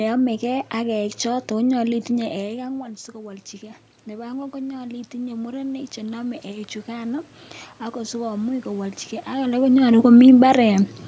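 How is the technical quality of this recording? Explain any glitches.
The recording has one glitch. From 1.89 to 7.33 s, automatic gain rising lifts the level by about 9 dB after the input fell about 14 dB when the talker moved back. Room noise swells along with the voice, which shows it is the gain control rather than the talker moving closer.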